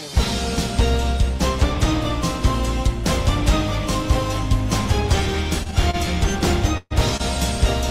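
From 5.63 to 5.95 s there is a stutter of repeated stalls: five brief holds, the longest 29 ms, that together stretch about 80 ms of sound, a quarter of the span. Packets kept arriving late, so the jitter buffer kept emptying. Nothing is lost, and the repeated catches set it apart from a single freeze.

At 6.77 s a call audio freeze lasts 132 ms, until 6.93 s. The last sound carries on and fades, ending in about 30 ms of silence, and then the sound resumes where it stopped. Packets held up in transit are the likely cause. It is one longer stop that drops to silence, not a cluster of catches.

From 7.17 to 7.21 s a short stall from a late packet holds the last sound for 29 ms until the packet arrives, then continues unbroken. It is a single slight drag with a faint buzz or dip, too brief to fade toward silence like the freeze.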